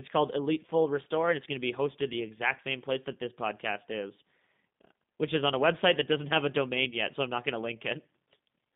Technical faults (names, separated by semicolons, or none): G.729 codec; VoIP packet loss concealed by the speech codec